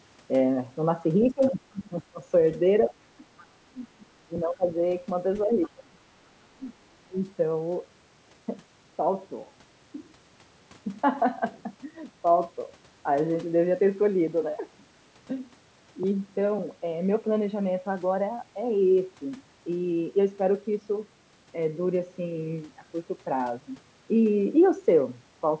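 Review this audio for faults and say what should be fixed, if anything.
Short scraps of the other side's voice leaking through sit faintly under the speech at 1.20–1.27 s, 3.38–3.44 s and 5.62–5.69 s, roughly 20 to 30 dB below it. The likely cause is loudspeaker echo that the canceller did not fully remove from the microphone. Better acoustic isolation between loudspeaker and microphone, or a headset, would prevent it.

The speech suppressed in double talk shows as dips and partial cut-outs of the talker at 1.22–2.21 s, 2.9–4.8 s, 5.44–6.0 s, 6.57–6.73 s and 7.06–7.24 s. It drops by up to about 25 dB, and about 15 dB in the 6.57 s dip. The likely cause is the echo canceller turning everything down while both sides spoke at once. Tuning the canceller for better double-talk detection would prevent it.

The 8 kHz band limit from the G.722 call path and microphone processing is normal.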